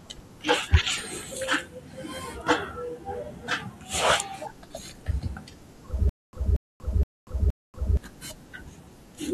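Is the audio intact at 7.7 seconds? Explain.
No, 7.7 s falls inside a stutter with silent gaps from 6.09 to 7.97 s: a 0.23 s speech burst repeats four times, each followed by about 0.24 s of dead silence, likely a stalled stream.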